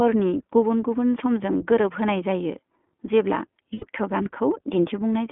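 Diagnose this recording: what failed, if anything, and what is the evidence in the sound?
The codec stage is the culprit here: it's iLBC, and you can hear it plainly. The sound sits in a narrow telephone band, roughly 200 Hz to 3.4 kHz, with that slightly rough, synthetic edge. The 20 ms framing fits the 15.2 kbps mode.

There are lost iLBC frames in the network path from 3.74 to 3.85 s. The decoder fills the gap by repeating the last pitch cycle mixed with noise, so you get a brief held, buzzy vowel. About 80 ms of audio is concealed, which fits four 20 ms frames going missing.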